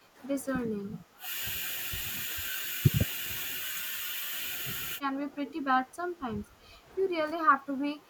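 From 0.0 to 0.18 s, the background is gated by the echo canceller. While the far end plays, the canceller pulls the microphone down by about 11 dB. The room sound dips for roughly a fifth of a second, then returns.

The speech is then suppressed in double talk at 0.69 to 1.29 s, 3.90 to 3.94 s, 5.50 to 6.76 s and 7.58 to 8.05 s. The voice sinks in pieces, by around 10 to 20 dB. The likely cause is the canceller mistaking overlapping talk for echo.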